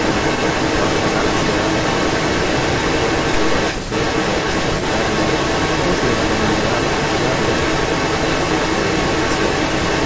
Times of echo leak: 0.00-10.06

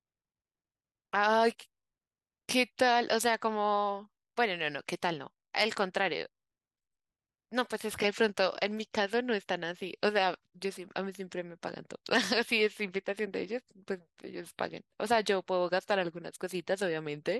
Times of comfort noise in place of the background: none

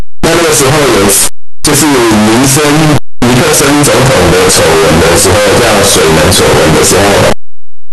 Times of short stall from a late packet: none

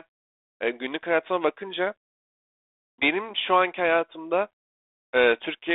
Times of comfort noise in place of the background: none

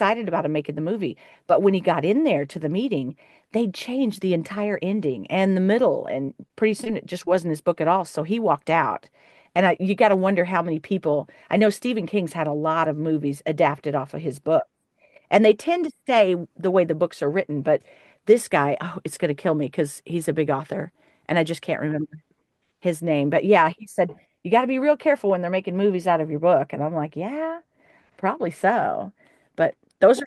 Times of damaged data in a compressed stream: none

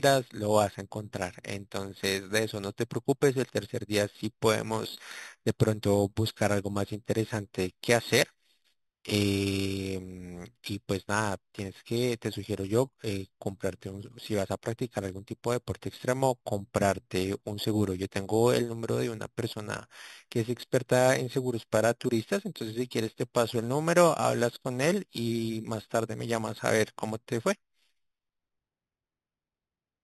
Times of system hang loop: none

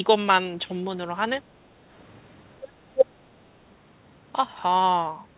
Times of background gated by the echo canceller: 1.51-1.63

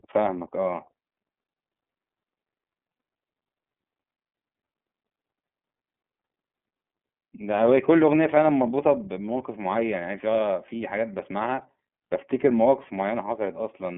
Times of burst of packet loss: none

